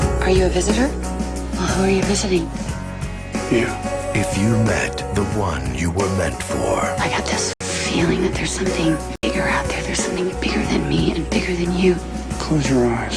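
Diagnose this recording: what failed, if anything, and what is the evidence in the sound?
A likely Bluetooth stall on the wireless playback link: delayed packets let the headphones' buffer run empty, so output halted until data arrived again. The sound cuts to silence at 7.53 s for 73 ms and at 9.16 s for 76 ms, then carries on.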